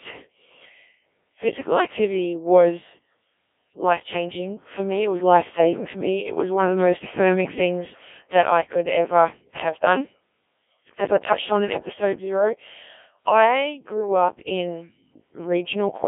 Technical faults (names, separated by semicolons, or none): Codec 2 vocoder